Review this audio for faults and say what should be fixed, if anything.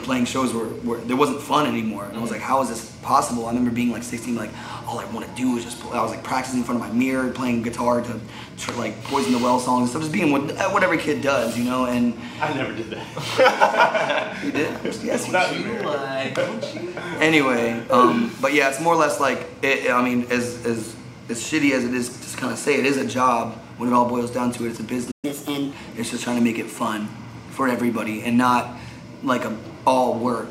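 At 25.11 s there's a playback stall: the sound drops out for about 120 ms, likely because the player starved or its thread got blocked, then resumes at 25.25 s.

Right after, from 25.25 to 25.73 s, you get catch-up at higher speed: the backlog plays at 1.25x, so pitch jumps around four semitones before settling.

A bigger playback buffer and keeping the audio thread free of blocking work should stop the stall, and with it the speed-up.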